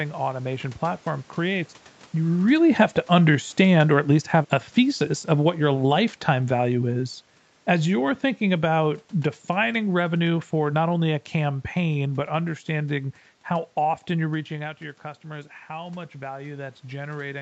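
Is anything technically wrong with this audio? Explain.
Yes, there are two automatic gain problems. From 2.17 to 6.94 s there's automatic gain falling: the talker seems to get louder at the mic just before, the AGC decides it's too hot and eases its gain down by about 6 dB, so the voice and the room noise sink together over those few seconds.

Then from 14.54 s to the end there's automatic gain rising: after the talker drops off by about 11 dB, the AGC slowly pushes its gain back up, and you hear speech and background swell together rather than the level snapping back.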